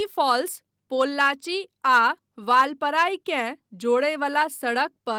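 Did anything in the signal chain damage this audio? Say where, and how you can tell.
No, nothing in the chain has damaged this speech; the Opus voice coding runs at 24 kbps in hybrid mode with the full band kept, energy reaching up to about 20.2 kHz, and leaves only light coding traces.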